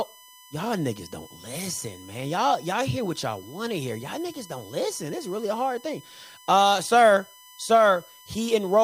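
Throughout the speech runs a USB whine, a fixed-pitch tone built on 1 kHz and strongest at its multiple 3 kHz, roughly 25 dB below the speech. Current drawn in 1 ms bus frames leaks through power or ground. Unlike mains hum, it sits far above 50 or 60 Hz.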